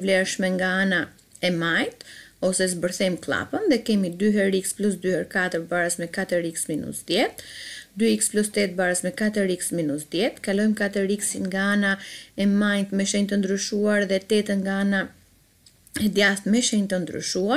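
No technical faults can be heard anywhere in the recording.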